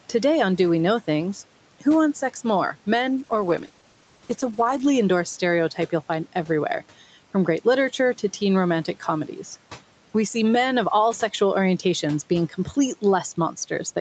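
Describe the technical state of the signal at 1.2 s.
At 1.2 s the speech signal is intact, with the call processing and codec path leaving nothing above about 8 kHz and the room noise sitting about 24 dB below the speech.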